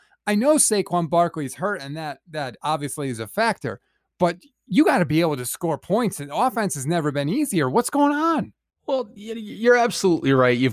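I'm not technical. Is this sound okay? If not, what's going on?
Yes, nothing in this recording points to a technical problem with how the sound was captured, stored or played back.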